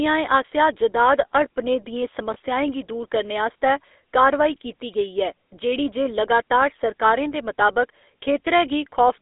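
From start to end the audio carries GSM full-rate codec damage: buzzy, gravelly roughness, and a spectrogram showing nothing below 300 Hz or above 3.6 kHz.

At 2.34 to 2.37 s, between "आसेआ जदाद हड़पने दियें" and "गी दूर करने आस्तै", lost GSM frames (consistent with one frame) leave a brief metallic ring, visible as a smeared, repeated spectral slice.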